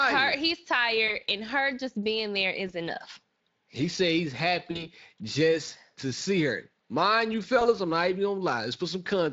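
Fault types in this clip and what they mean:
VoIP packet loss concealed by the speech codec: Audio packets went missing, and the decoder filled each gap by repeating its last pitch and filter at falling gain. Brief buzzy smears appear at 1.07, 2.67, 4.71 and 7.59 s, before "and her just being", "just to see her" and "I'm not even".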